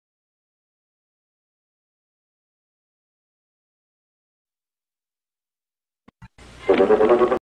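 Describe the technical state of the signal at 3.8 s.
At 3.8 s the signal is intact, with no audible fault at that moment.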